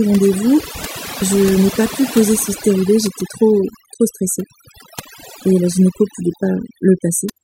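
From start to finish, the speech shows overdone noise removal: a noise reduction stage was set far too aggressively for the recording, so any frequency band sitting close to its noise estimate gets pulled down or switched off entirely. The quieter components of the speech are caught along with the noise. The result is a background that drops and breaks up into twinkling, warbling specks.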